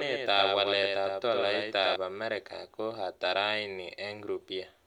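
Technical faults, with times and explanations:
0.0 to 1.96 s, doubled audio track: the speech is already doubled when the clip begins, with a second full-band copy trailing the original by about a tenth of a second and sitting about 5 dB lower. That gives a clean slapback with no reverberant tail or room colouring. The copy stops abruptly just before "amerika ko ata", most likely because the same signal was captured again through a slower path and mixed back in.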